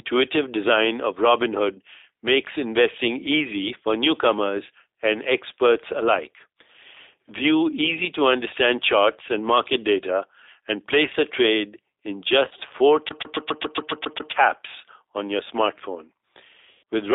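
The whole clip is speech carried through a G.729 codec, with the band held to about 300 Hz to 3.7 kHz. That band and the rough, slightly synthetic texture fit 8 kbit/s G.729A, which rebuilds the voice from a vocal tract model, pitch prediction and a few pulses per frame. The codec damage is plainly audible.

From 12.45 to 12.63 s, right after "place a trade in", VoIP packet loss concealed by the speech codec sets in. About 70 ms of audio is missing in short gaps spread over 160 ms, none longer than 30 ms. The decoder fills each gap by stretching its last pitch and filter state, so the voice is briefly weakened.

From 13.09 to 14.32 s the sound is stuck on one turn, like a skipping CD. The same 137 ms slice repeats nine times, with a small mute at each jump back. This gives a fast, even stutter.

At 16.72 to 16.83 s, after "on your smartphone", packet loss concealed by the speech codec returns, this time as about 110 ms of continuous loss. 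The extrapolated signal fades out before speech resumes.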